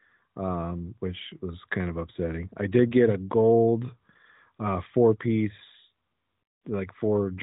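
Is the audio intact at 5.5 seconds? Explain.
Yes, the audio is intact at 5.5 seconds, with no fault at that moment.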